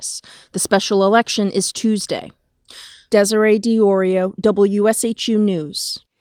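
No technical faults can be heard anywhere in this speech recording. There is nothing to mark at any point in the audio.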